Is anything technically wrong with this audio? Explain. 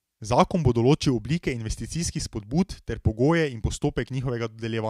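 No, nothing technically wrong turns up here; the speech comes through without any audible faults.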